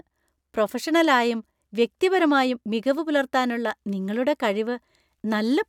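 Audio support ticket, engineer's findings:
Engineer's findings: no audio fault found in the speech recording.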